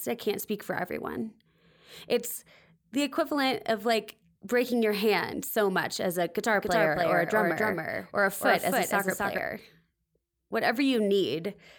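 Speech, with a doubled audio track from 6.55 to 9.39 s, right after "so much as a": a dry copy about 5 dB quieter trails roughly 0.3 s behind, starting and stopping abruptly, likely from a second, slower capture path.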